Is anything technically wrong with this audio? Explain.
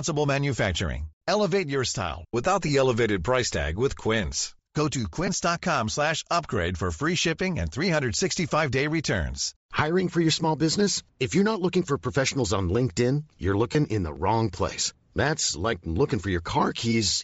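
Yes. Speech runs through a codec with plainly audible damage, and a handful of brief dropouts interrupt it.

Bluetooth LC3 compression is present for the whole clip. The damage fits LC3 at about 32 kbps with 10 ms frames, likely from an LE Audio link. At that rate the encoder discards much of the upper spectrum and substitutes generated noise, so the voice carries a breathy, grainy edge. A spectrogram shows the upper bands as diffuse, speckled noise rather than clean harmonic structure.

Lost LE Audio frames occur at 2.68 s, 5.27 to 5.29 s, 7.24 s, 9.77 s and 13.73 to 13.75 s. Each gap lasts about 10 ms, which points to a single lost frame, except the last at about 20 ms, which suggests two. The decoder fills each gap by replaying the previous spectrum with randomised signs. Tonal voice content briefly becomes a noisy smear, seen as a thin vertical band of scrambled energy on the spectrogram and a short patch of disordered waveform.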